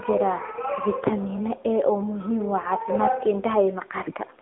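Throughout, the speech sounds thin, buzzy and synthetic, confined to roughly 250 Hz to 3.5 kHz with nothing above 3.8 kHz. This is the AMR narrowband mobile codec, its vocal-tract model coarsened by a low rate that fits the 7.4 kbps mode.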